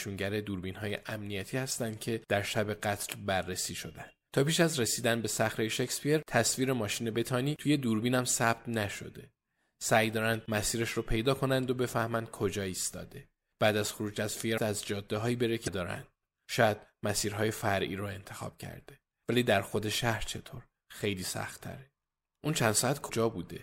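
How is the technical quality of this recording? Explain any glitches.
The speech recording has three brief glitches from damaged data in a compressed stream, at 14.54 to 14.59 s, 15.64 to 15.68 s, and 23.08 s. Corrupted bytes make the decoder misread frames and lose sync until the next header, producing short chirps, squawks, clicks or brief holes.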